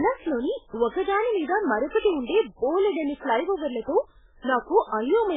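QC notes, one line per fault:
throughout: likely MP3 compression. Nothing above 3.8 kHz; speech sounds watery and swirly, fitting a bitrate near 8 kbps too starved to keep weak lines.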